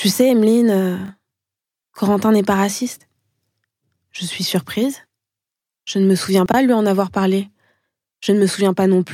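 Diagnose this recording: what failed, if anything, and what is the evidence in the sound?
Chunks out of order at 1.06 to 1.1 s and 6.46 to 6.54 s, between "ne me souviens" and "lui en avoir parlé": 20 ms blocks from the buffer play one and three chunks late, leaving jumbled joins.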